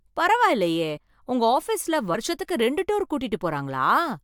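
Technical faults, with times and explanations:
0.96–0.98 s, compressed frames skipped: just before "உங்க ஆபீஸ்ல", the speech jumps forward. About two compressed frames of 21.3 ms each, roughly 40 ms of audio, were never played, either because they were missing from the stream or because the decoder rejected them as corrupt. The result is that the speech lurches ahead by the length of the missing frames.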